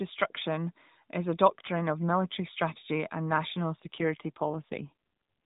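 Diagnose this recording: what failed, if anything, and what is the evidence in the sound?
AMR rate drop, network-driven: from 3.80 to 4.93 s the speech turns buzzier, fitting 12.2 falling to 5.9 kbps. Unlike packet loss, there is no gap and the band holds.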